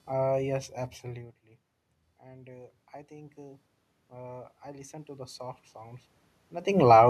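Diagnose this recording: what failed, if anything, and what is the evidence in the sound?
Automatic gain rising, a call processing fault. From 2.2 s to 6.79 s the speech and room noise swell together. The input level fell by about 18 dB. The gain control judged it too quiet and gradually raised its gain by about 10 dB.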